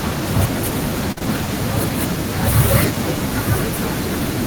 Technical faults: burst of packet loss; short concealed packet loss

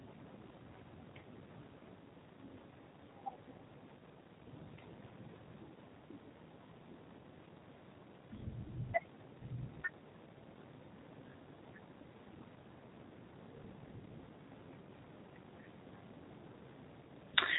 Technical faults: G.729 codec

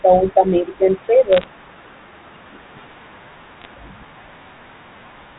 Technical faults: bit errors on a digital phone line

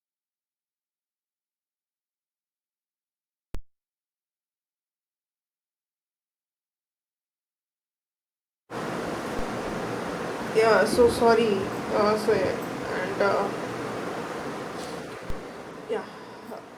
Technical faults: DC step

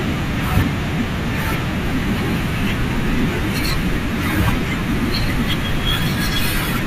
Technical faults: MP2 compression

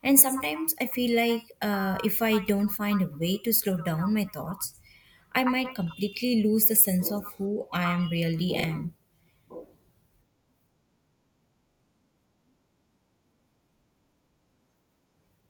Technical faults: repeated buffer

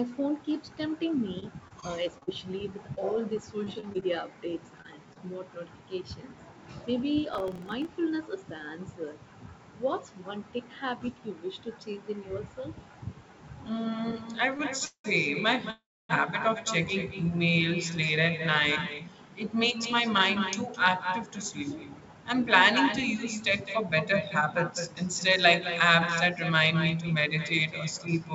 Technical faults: echo with no canceller; scattered short gaps; processor overload crackle; short stall from a late packet; call audio freeze; jitter buffer speed-up

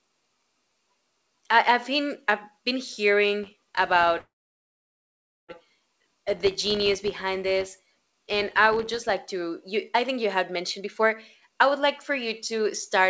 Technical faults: filter restarted on every block; call audio freeze; jitter buffer speed-up

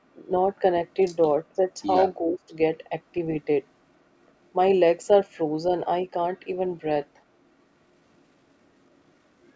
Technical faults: other side's voice leaking through; speech suppressed in double talk

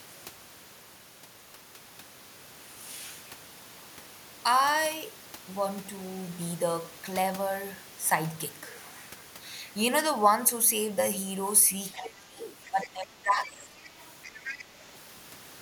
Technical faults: other side's voice leaking through; speech suppressed in double talk

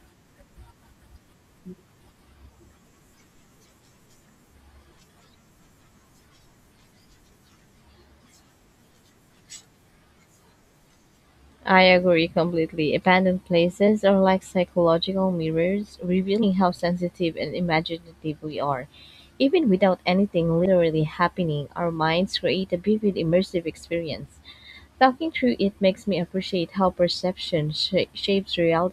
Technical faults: compressed frames skipped

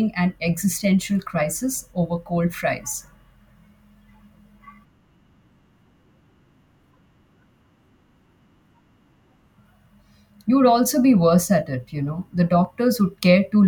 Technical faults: clock drift buffer slips

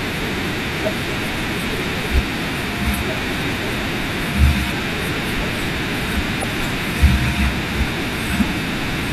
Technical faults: damaged data in a compressed stream

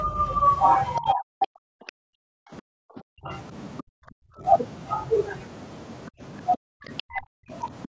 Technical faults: other side's voice leaking through; speech suppressed in double talk

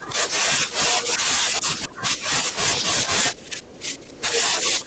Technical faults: speech suppressed in double talk; other side's voice leaking through

